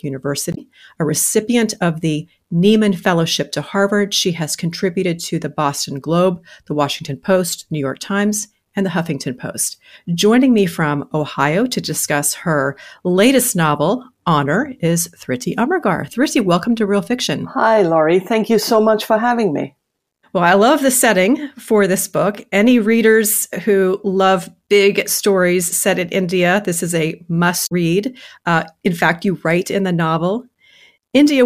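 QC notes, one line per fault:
0.51–0.58 s and 27.63–27.72 s, damaged data in a compressed stream: brief glitches, just before "a recipient of the" and just after "this is a". Corrupt bytes make the decoder misread frames and hunt for sync, so it's a brief chirp, squawk, click or break in the audio.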